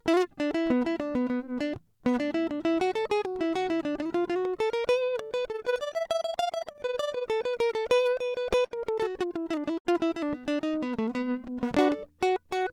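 From 5.48 to 7.31 s the music takes on an overlap-add ripple. It was split into windowed frames and rejoined with overlaps that do not sum to a constant gain. The level pumps by about 11 dB, roughly 20 times a second. The result is a fast, rough flutter.

Between 8.11 and 8.73 s there is a repeated stall, or stutter. Packets kept arriving late, so the jitter buffer ran dry several times. The receiver held the last sound to fill about 70 ms in all, with the longest gap 46 ms. Nothing is lost, but the music drags and hiccups.

At 9.78 s a short stall from a late packet follows. One packet missed its slot and the buffer emptied. The last sound is stretched by about 67 ms, and then playback resumes where it left off. One moment hangs slightly too long.

From 10.66 to 11.56 s a jitter buffer slow-down sets in. To rebuild its reserve, the receiver repeats single pitch periods over and over. This adds 81 ms and drops the speed to 92%. 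The music drags at an unchanged pitch and sounds drawn out.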